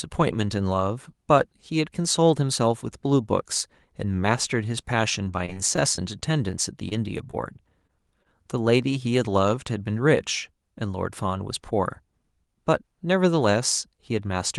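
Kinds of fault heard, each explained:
Scattered short gaps: packets went missing or arrived late at about ten points between 4.87 and 6.93 s, each patched by extending the preceding sound. About 120 ms of audio is lost, none of it in one piece longer than roughly 20 ms, so the speech stays clear apart from brief ticks and smears.
Short concealed packet loss: twice, at 7.31 s and at 7.87 s, 20 ms of audio never reached the decoder in time. The receiver covered each hole with a continuation of the last sound and then blended back, which leaves a momentary smear or wobble where that small piece is missing.
Short stall from a late packet: around 8.23 s a packet arrived late and the jitter buffer ran dry. The receiver held the previous sound for about 21 ms until it came, then resumed from the same place, so nothing is lost but a sound lingers slightly with a slight buzz or dip.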